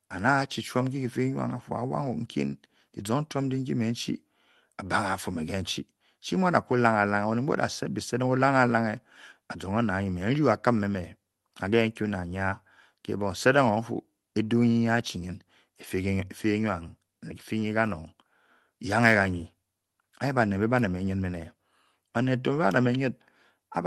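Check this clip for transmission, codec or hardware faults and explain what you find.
No transmission, codec or hardware faults can be heard in this speech. It carries the mild coding texture of a call codec, with the top end rolled off above about 12 kHz, which fits an Opus call link.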